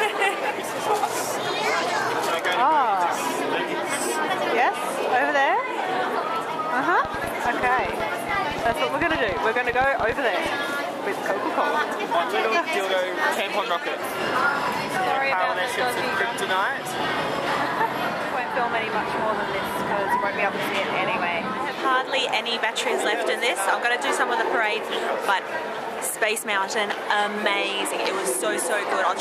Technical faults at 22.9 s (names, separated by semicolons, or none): none